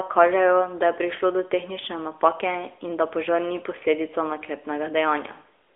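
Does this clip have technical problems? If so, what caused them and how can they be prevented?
Yes, the AMR narrowband mobile codec runs throughout: the speech sounds buzzy and synthetic, with nothing above 3.7 kHz, consistent with a higher-rate mode near 10 kbps. Record or route it over a wideband path instead of a narrowband phone link.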